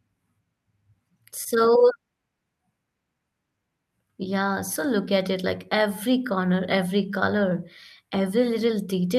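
No technical faults can be heard anywhere in this speech recording. Nothing in it needs a timestamp or a fault description.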